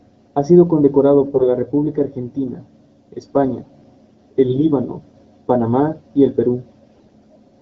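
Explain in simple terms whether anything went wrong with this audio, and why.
Brief hoarse, gargly bursts at 1.34–1.49 s (just after "sido condecorado"), 4.48–4.63 s and 6.95–7.14 s are AMR bit errors: a weak connection flipped bits in the coded speech.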